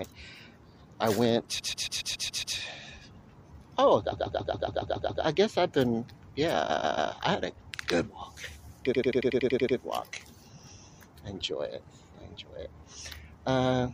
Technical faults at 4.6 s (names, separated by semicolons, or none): repeated frames